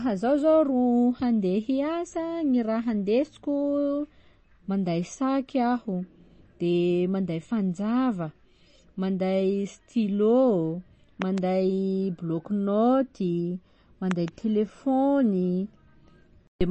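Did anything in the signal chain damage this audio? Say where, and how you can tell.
Yes. Codec stage. The speech sounds plainly watery throughout, with nothing above 8.3 kHz. This is likely MP3 encoding, fitting a bitrate around 32 kbps.

Likely analogue wiring or driver stage. A loud pop, heard as two pops, occurs at 11.22–11.40 s and 14.11–14.30 s, after "bloc naoty". Peaks reach about 15 dB and 10 dB above the speech.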